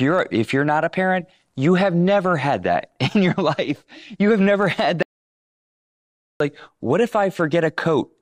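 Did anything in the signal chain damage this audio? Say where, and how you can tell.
Yes. After "have never had" at 5.03 s the speech drops into dead digital silence, with no room tone, until "like what if" at 6.40 s, about 1.38 s lost. This audio dropout to silence likely came from a lost input link while silence was written.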